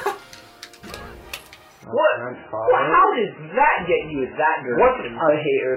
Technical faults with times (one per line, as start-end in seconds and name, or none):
1.84-5.76 adaptive stream at a lower bitrate